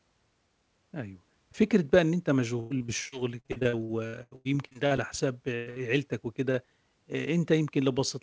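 It's a speech clip with a patch of repeated packet loss (robotic sound) from about 2.60 to 5.00 s. The stream keeps dropping out, 18 gaps in that stretch, and each one gets papered over by stretching the last bit of sound. Nearly a third of that span is concealment, the longest gap around 100 ms, so it comes out choppy with pieces missing. Right after that are two bursts of packet loss, at 5.56 to 5.68 s and 5.70 to 5.78 s. In each, a short run of audio didn't arrive in time, and the receiver held and faded the last sound for about 0.11 s and 0.05 s before jumping ahead, so there's a brief buzz or hiss and then a skip. Underneath it all you can hear the call codec's wideband character, with nothing above 8 kHz, which fits G.722.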